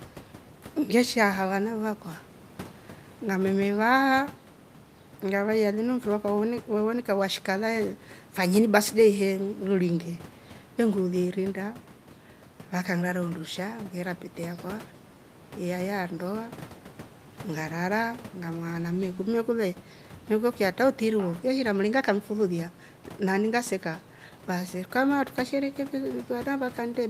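Nothing stood out on listening to this speech recording, and the room noise sits about 22 dB below the speech as part of the recorded space.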